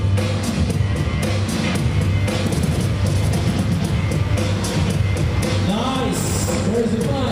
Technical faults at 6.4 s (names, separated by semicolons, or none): mains buzz